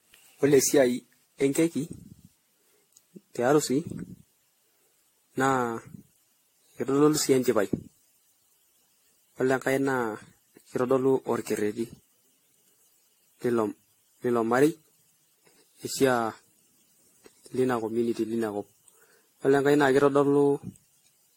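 Throughout, the speech sounds swirly, smeared and hollow, with blurred attacks and nothing above 16.6 kHz. This is generation loss, likely from about ten AAC-LC re-encodes near 64 kbit/s.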